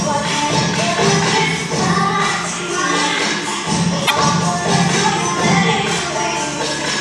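At 4.04 s, damaged data in a compressed stream breaks the audio for about 70 ms, until 4.11 s. Corrupted bytes reach the decoder there. It misreads those frames and loses sync while hunting for the next valid header. The result is a short, garbled burst.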